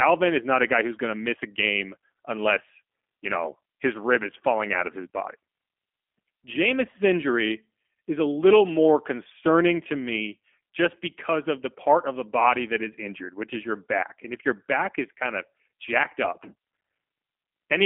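Throughout, speech passes through the low-rate G.729 codec, which fits 8 kbit/s: nothing above 3.5 kHz survives, leaving a narrow, plainly rough, synthetic telephone sound.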